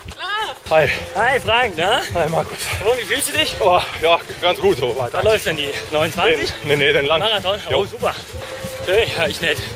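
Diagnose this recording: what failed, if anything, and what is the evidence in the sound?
No fault is audible here.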